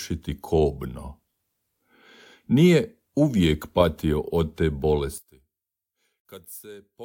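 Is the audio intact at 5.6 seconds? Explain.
No. From 5.18 s to 7.05 s, right after "uvijek patio od te", the speech drops by about 23 dB and turns faint, with its centred body largely gone. That points to one channel inverted as the likely cause. With one side's polarity reversed, the material common to both channels cancels when they are summed to mono, leaving only the weak difference between them.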